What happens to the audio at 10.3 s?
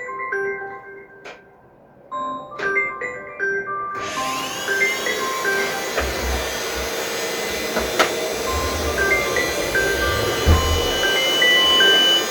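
At 10.3 s a loudspeaker feedback squeal is building. From 9.69 s to the end, a microphone re-captures its own loudspeaker and the loop gain exceeds one at 3 kHz. A pure tone swells over roughly two seconds until it sits a few decibels above the sound.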